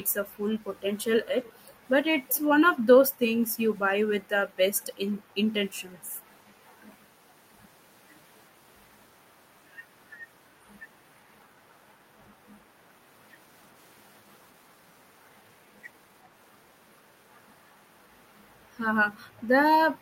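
At 1.44 s to 1.73 s, a faint delayed copy of the speech appears. It returns at 2.30 s to 2.41 s. Each copy trails the original by 378 ms. It sits far below the main speech, roughly 25 dB down. This is an echo leak. The likely cause is a far end playing the call on a loudspeaker, with its echo canceller letting part of the microphone pickup slip back. The scraps sound brief and ghostly.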